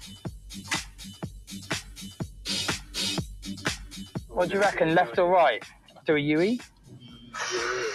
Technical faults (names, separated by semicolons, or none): noise suppressor applied to music or sounds; sound cut by the noise suppressor